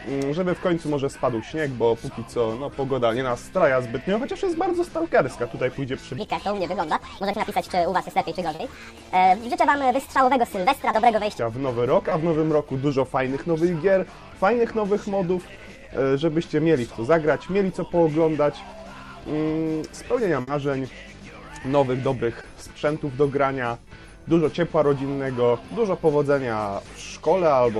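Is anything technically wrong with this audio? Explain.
Yes. From 6.18 to 11.39 s a section plays at the wrong speed, 1.54 times too fast and about seven semitones high, likely from a clock mismatch. On a spectrogram its harmonics sit visibly higher and its events are compressed in time.

Short concealed packet loss occurs at 7.31 to 7.35, 8.55 to 8.61, 10.91 to 10.95, 12.09 to 12.13 and 22.41 to 22.45 s. The receiver patched each gap by extending the preceding sound, which is heard as a brief smear or wobble and seen as a short, smoothed patch in the spectrogram.

A burst of packet loss at 20.41 to 20.49 s left about 60 ms that was filled and faded out before the audio resumed further on. It sounds like a held buzz or hiss that dies away, and the waveform shows a decaying stretch before the sound restarts.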